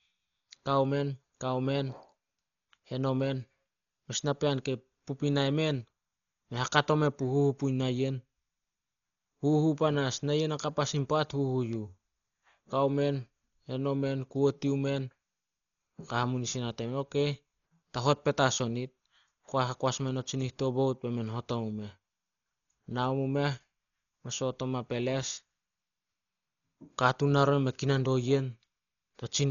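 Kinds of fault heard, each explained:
Dolby Digital compression: The speech sounds dull, with nothing above 6.9 kHz and a rough, fluttering noise around tones. This is likely heavy Dolby Digital coding at a starved bitrate, about 40 kbps, where the encoder narrows the band and leaves lines unfunded, which the decoder fills with dither noise.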